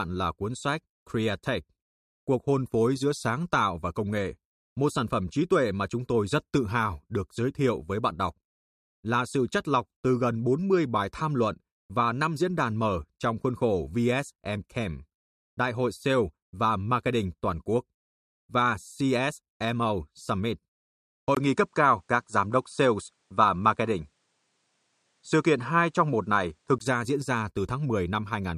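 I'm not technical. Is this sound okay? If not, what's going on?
No. From 21.35 to 26.80 seconds the recording likely switched to a poorer device partway through, with a brief gap of about 20 ms at the switch. The stand-in microphone captures nothing above 10.5 kHz, so the speech loses its crisp top and sounds duller. The loudness shifts, and a new background noise sits well below the voice. The switch comes just before "ra diễn ra".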